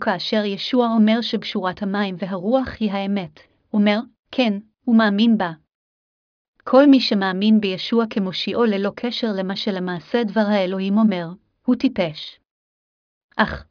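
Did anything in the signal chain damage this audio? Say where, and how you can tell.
No, nothing in the chain audibly damaged this speech.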